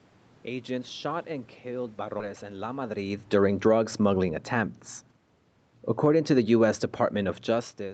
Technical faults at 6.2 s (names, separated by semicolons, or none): automatic gain falling